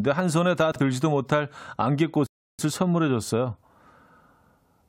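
At 0.72 to 0.80 s the speech briefly jumbles: chunks out of order, where one 40 ms chunk played a chunk late, leaving hard joins. At 2.26 s the speech drops to silence and resumes exactly where it stopped at 2.59 s, a rebuffering stall that added 0.32 s while the player waited for data.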